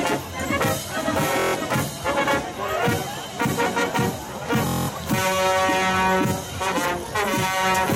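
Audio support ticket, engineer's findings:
Bluetooth stutter at 1.40–1.55 s and 4.67–4.90 s: link dropped or delayed packets, and the receiver looped its last short buffer. The result is a rapid machine-gun repeat, then the sound resumes with about 0.14 s and 0.21 s of material skipped.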